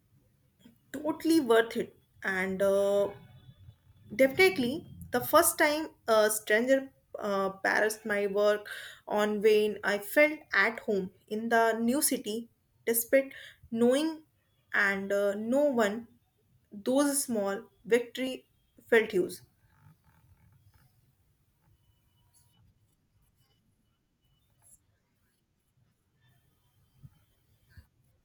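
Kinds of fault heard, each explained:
Periodic USB or driver dropouts: in this speech, regular ticks land once a second from 17.27 to 22.27 s, each where well under a millisecond of audio is skipped outright, pointing to a background task briefly stalling the USB bus or audio driver on a fixed schedule.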